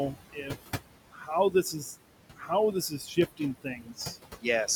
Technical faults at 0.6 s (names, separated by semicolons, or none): noise suppressor artifacts; speech cut by the noise suppressor